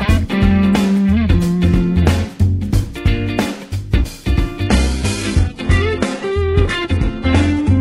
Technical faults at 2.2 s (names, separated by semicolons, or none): none